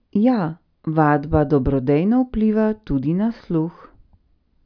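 No faults can be heard anywhere in this speech recording.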